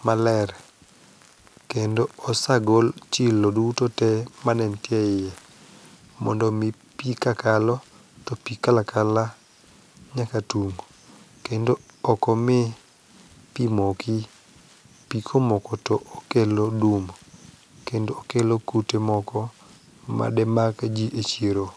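No technical faults can be heard anywhere in this speech recording. Nothing in it calls for a timestamp, a measured value or a remedy.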